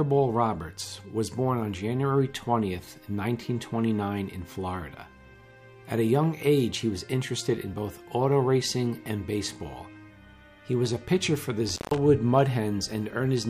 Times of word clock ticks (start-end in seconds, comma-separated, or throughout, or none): none